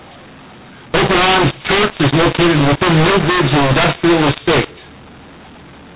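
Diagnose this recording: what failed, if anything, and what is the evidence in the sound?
Codec stage: mu-law and A-law mixed up. Speech encoded as A-law is decoded as mu-law throughout. Levels come out scrambled, speech sounds harsh, and pauses fill with noise.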